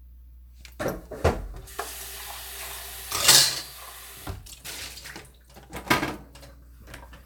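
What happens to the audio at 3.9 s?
Nothing goes wrong at 3.9 s; the sounds carry on intact through that moment.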